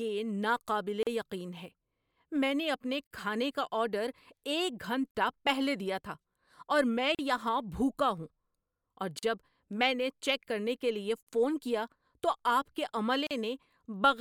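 Separately encoded two-second pieces were joined without trimming their encoder delay and padding, leaving a gap at a join of encoded pieces: a gap of about 40 ms cutting the speech at 1.03, 3.07, 5.11 (before "پہلے دیا تھا اور"), 7.15, 9.19 (before "میں نے"), 11.23 (between "کرنے کے لیے" and "فون کیا تو") and 13.27 s, each with smeared edges.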